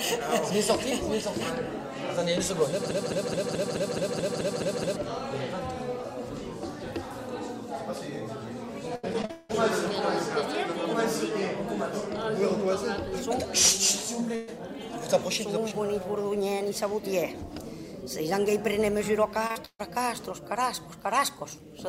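The audio carries several network and playback faults spread across its length. From 2.91 to 4.96 s there is a broken-record loop: a 214 ms fragment plays back to back ten times, repeating exactly rather than moving on. That points to a stall in the player, encoder or stream, most likely one that kept resending the last piece it held. Whatever should have played during those two seconds is gone. Between 8.95 and 9.55 s the sound turns choppy and robotic from repeated packet loss. Six separate holes fall inside that 0.6 s stretch, the longest about 180 ms, and roughly half the span is concealment rather than real signal. Each gap is patched by extending the preceding sound before the next one arrives, so about 320 ms of material is missing. At 14.35 to 14.49 s a burst of packet loss removes about 120 ms. The receiver bridges it entirely by continuing the last sound and fading it, with no silence, and the audio then resumes further along. 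Near 19.5 s comes a short concealed packet loss in two adjacent pieces, 19.47 to 19.51 s (20 ms) and 19.51 to 19.57 s (40 ms). Together they form a brief smear where the decoder extrapolated from the preceding signal before blending back. Almost immediately after, from 19.65 to 19.81 s, a second burst of packet loss takes out about 140 ms. Here the concealed tail decays away and the last 50 ms drop to silence before real audio returns.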